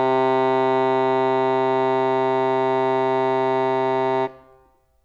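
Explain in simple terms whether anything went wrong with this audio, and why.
Nothing went wrong here: the music comes through as a steady, intact signal, with nothing in it that points to a technical problem.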